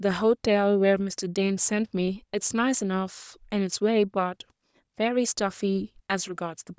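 Nothing in this recording stands out as a technical fault, so there's nothing here to flag or trace back to a cause.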